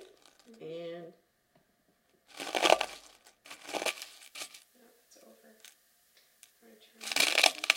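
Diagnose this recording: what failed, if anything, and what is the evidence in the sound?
Pre-emphasis left on from 3.88 s to the end: the treble jumps about 11 dB at 10 kHz against 1 kHz, so the sound turns thin and bright because the transmission chain's matching de-emphasis stage never restored it.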